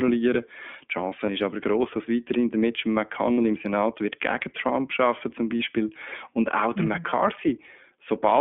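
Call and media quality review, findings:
iLBC codec, whole clip: speech band-limited to roughly 200 Hz–3.4 kHz, slightly rough and synthetic, plainly audible damage. Narrowband VoIP codec coding each 20 ms frame independently, consistent with the 15.2 kbps mode. Spectrogram: hard ceiling near 3.4 kHz, empty above.

Lost iLBC frames: brief held buzzy vowel at 1.26–1.29 s (just before "ist aber groß dass"), 3.32–3.39 s (60 ms, three frames' worth), 5.58–5.61 s (after "arbeiten zum"), 7.10–7.13 s (after "und auch der mhm"). Decoder concealment repeats the last pitch cycle plus noise, with instant recovery. Waveform: short periodic repeated segment. Spectrogram: flat harmonic smear.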